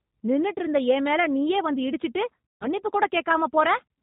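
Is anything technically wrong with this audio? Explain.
Yes. Throughout, the G.729 codec sounds consistent with 8 kbit/s coding: nothing above 4 kHz, and a rough, synthetic texture from pulse-based excitation rebuilding the sound.

From 2.54 to 2.67 s, VoIP packet loss is concealed by the speech codec. The decoder extrapolates its last pitch and filter at falling gain, giving a buzzy tone or coloured noise that fades before recovery.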